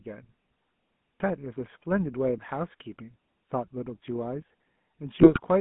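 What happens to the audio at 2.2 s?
At 2.2 s, as throughout, the speech sounds buzzy, gravelly and boxed into a band of about 150 Hz to 3.5 kHz, the mark of the GSM full-rate codec, whose pulse-driven vocal-tract model fits a 13 kbps phone line.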